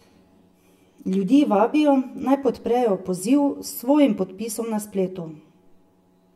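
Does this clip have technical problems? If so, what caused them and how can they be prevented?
Yes. Channel delay causes comb filtering throughout. One channel runs about 10 ms late. Summed to mono, the speech cancels in evenly spaced notches, starting around 50 Hz. The result sounds hollow and phasey. Time-align both channels before any mono fold-down.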